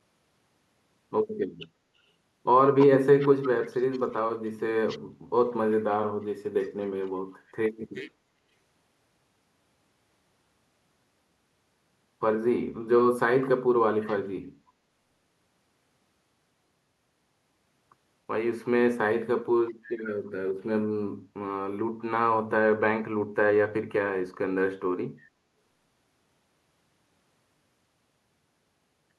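At 2.79 s and again from 3.2 to 3.49 s, a delayed copy of the speech surfaces about 327 ms behind the original. This is echo leak, likely a loudspeaker echo the far-end canceller failed to remove. The copy is loud at first, about 5 dB under the speech, then near 15 dB under. On a spectrogram, duplicated harmonic traces trail the originals.

From 3.45 to 7.43 s, roughly four seconds, the speech sinks in uneven pieces, at worst by about 35 dB. This is speech suppressed in double talk. The canceller likely confused the talker with echo and attenuated both. The waveform shows gouged, collapsing envelopes, and the spectrogram shows gaps with a missing high end.

Brief echo-leak scraps return at 14.01 to 14.15 s, about 20 dB down, and at 20.26 s, near 35 dB down.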